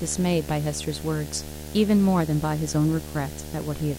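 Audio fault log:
throughout: video or display buzz, a steady 75 Hz buzz with hash above it, roughly 15 dB below the speech, from a screen or video cable coupling in at the field rate; a spectrogram shows lines at 75, 150 and 225 Hz, and the waveform repeats every 13.3 ms.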